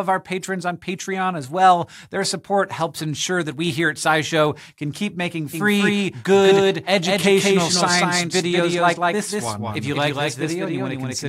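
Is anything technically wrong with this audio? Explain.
Yes. From 5.53 s to the end, the audio carries a doubled audio track. A second, full-band copy follows about a fifth of a second behind. It is roughly as loud as the original. The copy starts abruptly, with no fade. It has no decay or room colour. This is likely a second capture through a slower path, mixed back in. Every event is heard twice.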